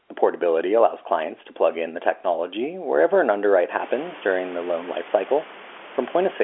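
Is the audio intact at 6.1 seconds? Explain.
Yes, the audio is intact at 6.1 seconds; nothing there is a fault, only the telephone-band speech of the call with the room's background noise sitting well beneath it.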